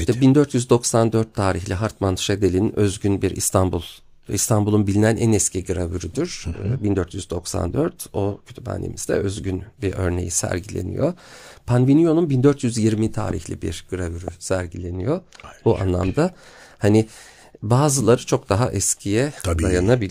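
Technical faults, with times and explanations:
13.31–13.33 s and 14.28–14.30 s: loud pop. Each is one sharp pop, about 10 dB above the speech, which continues underneath. Likely a brief voltage spike.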